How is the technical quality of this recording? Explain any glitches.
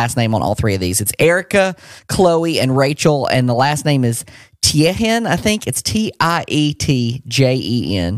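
No glitches or technical faults are audible anywhere in the recording.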